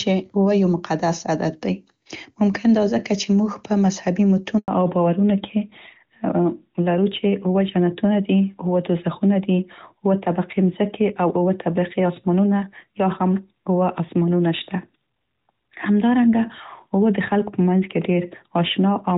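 Right after "په مذهبي", at 4.58 s, there's a handover gap: the call gets passed between networks and no speech frames come through during the switch, so the sound cuts out for about 100 ms and whatever was said in that slot is simply gone.

Once the link comes back at 4.68 s, you get a fallback to narrowband that lasts to the end. Before the gap the HD Voice path sounds like high-rate AMR-WB with hardly any codec damage. After it, everything above 4 kHz is missing, which points to AMR-NB at around 12.2 kbit/s. The speech goes duller and rougher.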